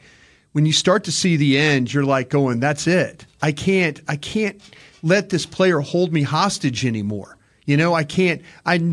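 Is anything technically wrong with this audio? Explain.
No, nothing is technically wrong with this audio.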